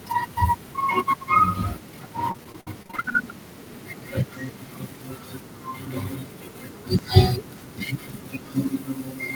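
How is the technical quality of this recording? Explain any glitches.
Two glitches stand out in this speech recording.

From 2.31 to 3.15 s there's repeated packet loss. About a dozen short gaps, the longest 56 ms, get patched by stretching the previous sound, so roughly 29% of that stretch turns choppy and robotic.

At 6.99 s there's a sudden jump forward, losing around 40 ms. That's likely a dropped buffer (overrun), where unread samples were overwritten and the edges spliced together.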